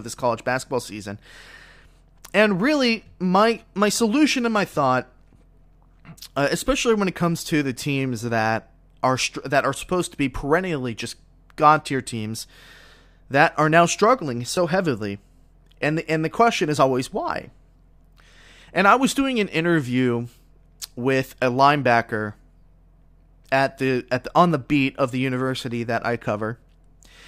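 At 14.56 s a repeated buffer occurs: a 10 ms block plays twice when fresh audio arrives late, producing a brief click-like stutter with a hard join.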